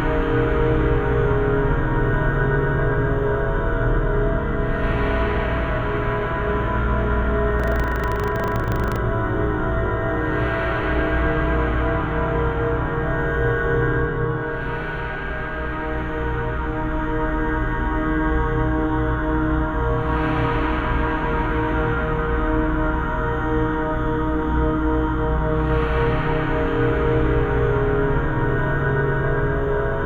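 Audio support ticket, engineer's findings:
Buffer tearing, 7.56 to 8.97 s. A rattly, robotic buzz at 25 Hz, which fits a 40 ms buffer period, and it only sits on the signal. Probably the playback ring buffer: the app's writes and the device's reads have drifted until they cross every period. A small slice of each buffer, only a few percent, is replaying audio about a tenth of a second old, with hard edges on both joins. I'd check the write-pointer timing first.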